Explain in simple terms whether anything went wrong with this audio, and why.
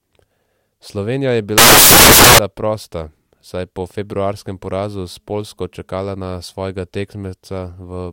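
From about 1.58 to 2.39 seconds the speech is swamped by a burst of loud hiss, like harsh static, which clears just before "prosta saj je po". This is a case of samples built from the wrong bytes. Each sample is stored as a few bytes, and here they were put back together in the wrong order or offset by one. The tiny, fast-changing details end up as the loudest part, so the sound becomes noise.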